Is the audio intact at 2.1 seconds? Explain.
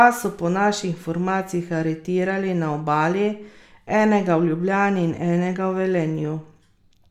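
Yes, the speech at 2.1 seconds plays through intact, with no dropout, click, distortion or other fault at that moment.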